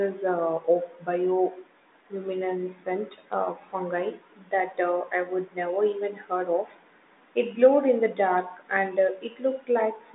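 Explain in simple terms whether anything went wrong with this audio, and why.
No, nothing went wrong here.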